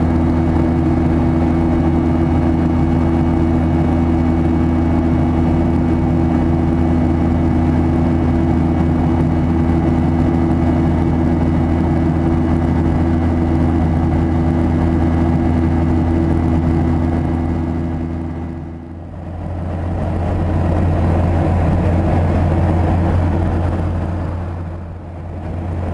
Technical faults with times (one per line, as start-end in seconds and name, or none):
none